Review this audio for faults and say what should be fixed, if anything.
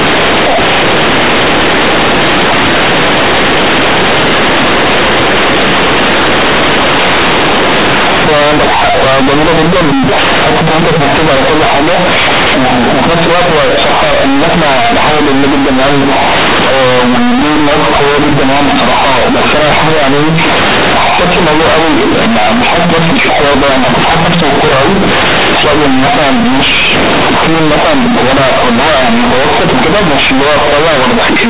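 The whole clip suffers from companded audio read as linear. The A-law bytes are going out as plain 8-bit linear samples without expansion, so every sign change swings across half the range, quiet passages come out as large as loud ones, and the speech becomes loud, buzzy distortion with heavy noise in the gaps. The 8 kHz A-law coding itself is fine. To prevent this, make sure the playback path decodes A-law back to linear PCM before output.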